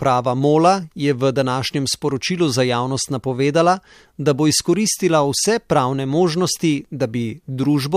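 No technical faults can be heard anywhere in the recording. The speech continues without any interruption or audible disturbance.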